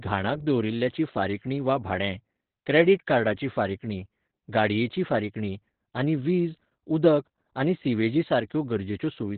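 From start to finish the speech carries Opus voice compression running in its SILK speech mode, with nothing above about 4.4 kHz, so it's squeezed down to narrowband. The damage is heavy: muffled, hoarse and a bit robotic, which fits a very low bitrate around 8 kbps.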